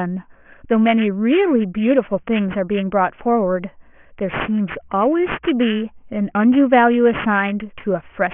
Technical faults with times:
0.00-8.33 aliasing

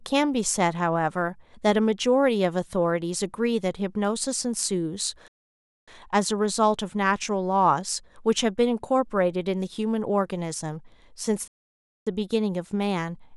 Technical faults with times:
5.28-5.88 playback stall
11.48-12.07 playback stall

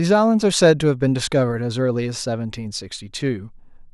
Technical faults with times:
none

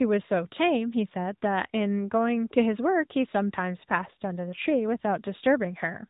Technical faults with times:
0.00-6.09 AMR narrowband mobile codec

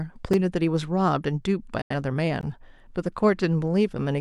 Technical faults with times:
0.33 block of digital silence
1.82-1.94 digital broadcast dropout
2.41 block of digital silence

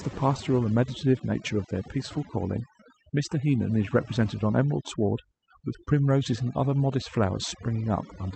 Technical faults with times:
0.00-8.36 overdone noise removal
0.00-8.36 clock drift between sender and receiver
0.07-8.31 repeated timing corrections

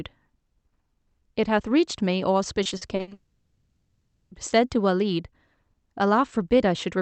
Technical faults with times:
2.63-3.13 repeated packet loss (robotic sound)
3.13-4.33 long network dropout

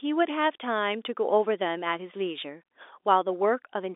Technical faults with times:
none

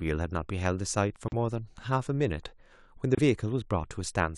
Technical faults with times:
1.28-1.33 corrupt frame decoded
3.15-3.19 corrupt frame decoded

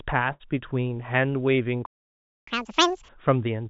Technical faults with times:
0.32-0.42 burst of packet loss
1.86-2.47 playback stall
2.47-3.09 catch-up at higher speed

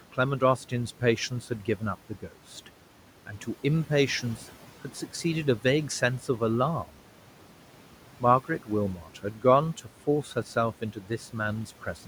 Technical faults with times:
0.00-12.07 noise suppressor artifacts
0.12-2.68 speech cut by the noise suppressor
5.63-6.41 speech cut by the noise suppressor
8.20-9.44 speech cut by the noise suppressor
10.81-11.35 speech cut by the noise suppressor

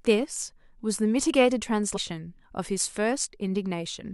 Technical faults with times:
1.95-1.97 damaged data in a compressed stream

